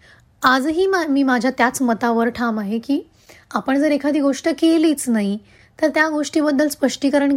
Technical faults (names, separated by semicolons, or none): none